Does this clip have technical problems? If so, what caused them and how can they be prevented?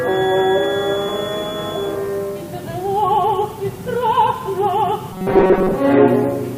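Yes. From 0.0 to 2.0 s there is a feedback whistle: a thin tone at 3.4 kHz, roughly 15 dB below the main sound. It likely comes from a loudspeaker-to-microphone loop sitting just at the edge of feedback. A spectrogram would show a narrow horizontal line at 3.4 kHz. Lowering monitor gain, moving the microphone away from speakers, or using a notch filter prevents it.

From 5.13 to 5.77 s there is robotic sound from repeated short buffers: a rigid, metallic buzz at 188 Hz. Its cause is likely late audio delivery, with the software looping a fragment of about 5.3 ms while most of the real audio in that stretch is skipped. The waveform would show identical short segments repeating, and a spectrogram would show evenly spaced harmonics of 188 Hz. Larger buffers or a more stable audio path prevent it.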